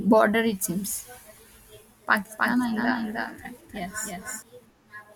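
From 2.38 to 4.42 s the speech has a doubled audio track. A second, full-band copy trails the original by roughly 300 ms, about 5 dB quieter. It is likely captured twice through a slower path. The echo starts and stops abruptly, with no room decay.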